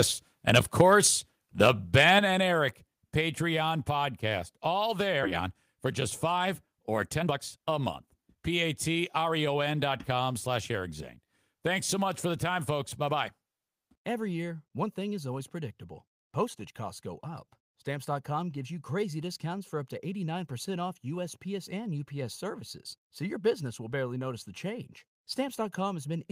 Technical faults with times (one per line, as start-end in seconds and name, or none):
0.49-1.06 microphone overload
0.81 microphone volume stepped down
1.61-2.09 microphone overload
2.19 microphone volume stepped down
5.23 skip ahead
6.90-9.55 jitter buffer speed-up